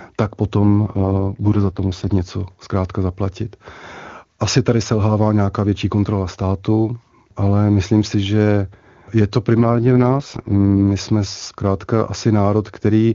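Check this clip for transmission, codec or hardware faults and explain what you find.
There are two AMR rate drops in this speech. The first runs from 0.59 to 2.12 s. The second runs from 9.57 to 10.83 s. In each one, the voice turns rough, raspy and synthetic, and then it recovers. The bandwidth does not narrow and there is no gap. That points to the radio link weakening. The network then moves the AMR-WB codec from about 23.85 down to about 6.6 kbit/s and uses the freed bits for error protection.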